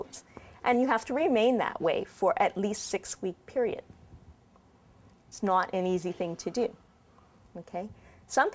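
Aliasing runs through the whole clip. It sounds like a drop from 48 kHz to 16 kHz with no anti-alias filter, so content above 8 kHz folds back as unrelated tones about 20 dB down. Unlike a clean low-pass, the top turns gritty and metallic rather than dull.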